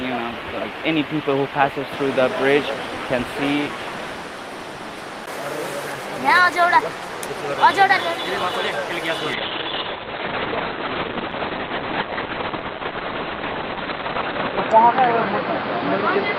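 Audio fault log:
9.34 s to end: call bitrate drop. The encoder is starved of bits, and the band narrows from about 20 kHz to 4 kHz, making the sound muffled and watery, consistent with a fall from about 32 to 6 kbps. A spectrogram shows everything above 4 kHz blank.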